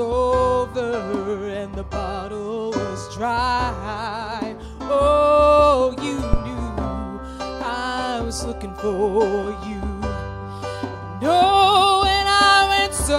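The audio has a single phantom power thump from 6.33 to 6.40 s. It is a deep, low thud peaking at about -2 dBFS. It dies away within 15 ms. A supply was switched on a live input, and the voltage step passed through the coupling capacitors.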